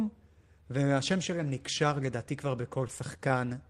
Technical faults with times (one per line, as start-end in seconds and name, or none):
2.61-3.41 repeated stalls (stutter)